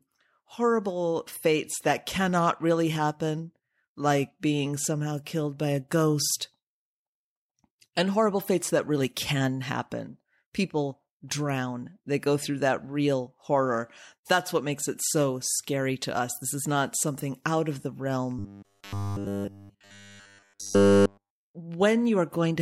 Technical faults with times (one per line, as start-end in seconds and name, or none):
18.39-21.55 robotic sound from repeated short buffers